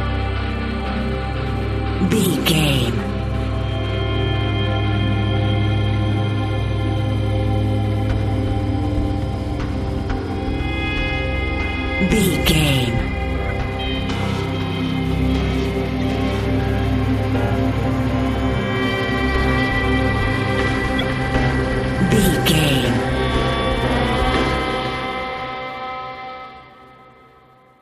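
Corrupt frame decoded at 13.46–13.51 s, 16.01–16.04 s and 20.99–21.04 s: each brief chirp or noise burst, 26 to 50 ms long, suggests a few compressed frames with damaged bits that were decoded anyway, misplacing energy across wrong frequencies.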